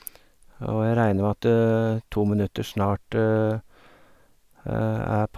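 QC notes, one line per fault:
No faults heard in speech.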